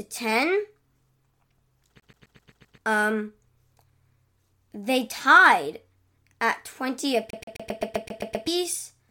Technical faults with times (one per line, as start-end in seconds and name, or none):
2.00-2.78 CD stuck on one turn
7.30-8.47 CD stuck on one turn